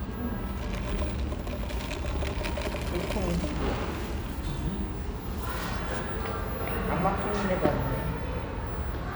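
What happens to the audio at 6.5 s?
Nothing goes wrong at 6.5 s; the audio plays through that moment intact, with no dropout, click or distortion.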